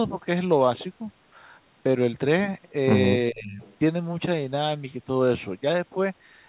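Speech suppressed in double talk, from 3.3 to 3.62 s: the speech sags by around 20 dB for about a third of a second, likely because the echo canceller mistook overlapping talk for loudspeaker echo and turned everything down.

Echo leak, from 3.63 to 3.76 s: a faint copy of the speech returns 400 ms late, around 30 dB below the talker, likely residue a loudspeaker-side echo canceller failed to remove before sending its microphone signal back.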